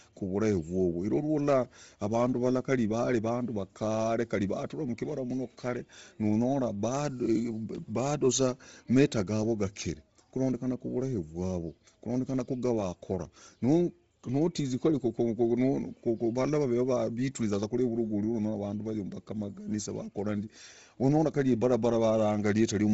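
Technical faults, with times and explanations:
Throughout: Bluetooth LC3 compression, likely. The speech stops dead above 7.7 kHz, and the damage is heavy: noise-filled highs give a grainy, breathy edge, not the swirling, watery artefacts of MP3. This points to roughly 24 kbps in 7.5 ms frames.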